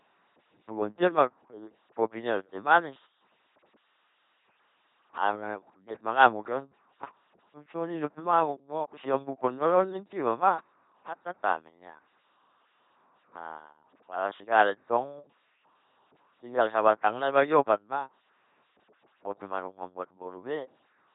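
Throughout the clip the speech has been passed through an LPC-10 vocoder. Instead of keeping the waveform, the codec reduced each moment to a short all-pole vocal tract filter driven by either a buzz of pulses or noise, with no blend between them. The damage is heavy, which fits a 2.4 kbit/s vocoder: a flat, buzzing robotic voice with stray hiss or buzz where voicing was misjudged, and nothing above 3.8 kHz.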